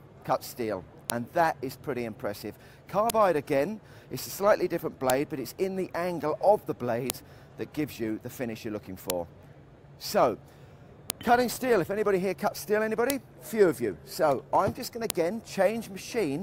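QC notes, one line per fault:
1.10, 3.10, 5.10, 7.10, 9.10, 11.10, 13.10 and 15.10 s: file header played as audio. A short, sharp click or snap lands every 2.0 s, regardless of what the signal is doing at that moment. The regular spacing points to the audio being assembled from 2-second WAV pieces whose headers were left in place, so each piece's few dozen header bytes are read and played as sample values at the join.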